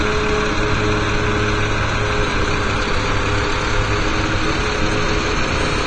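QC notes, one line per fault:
Throughout, doubled audio track: the same signal is likely reaching the mix twice, once directly and once through a slower path, so a second full-band copy trails the first by about half a second at roughly equal level. Every sound event is followed by a crisp, identical repeat with no decay or room colouring. It sounds like a hard slap-back echo rather than a reflection.
Throughout, AAC compression: the audio has passed through an AAC-LC encoder working at a low bitrate, which fits a setting around 32 kbps. To save bits, the encoder cuts the top of the spectrum, leaving nothing above 9 kHz, and coarsely quantises what remains. The sound comes across as dull and smeared, with plainly audible warbling and fizzy artefacts on sustained or noisy sounds where the encoder has dropped or substituted spectral detail.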